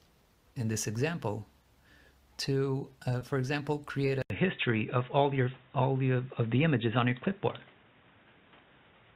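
At 3.19 to 3.23 s a packet arrived late and the jitter buffer ran dry, producing a short stall from a late packet. The receiver held the last sound for about 20 ms until the packet turned up, then carried on from the same point, so nothing is lost. Playback runs about 20 ms later from there on. The stall is audible as a brief smear where the sound lingers too long, with a faint buzz or dip.

From 4.22 s to the end, the input likely switched to a poorer device. An 80 ms silence marks the switch. After it, the band is cut off at 3.8 kHz, so the sound turns dull and boxy, loses its top end, and shifts in level by a few decibels. A new noise floor sits roughly 35 dB under the signal, a quiet background noise that was not there before.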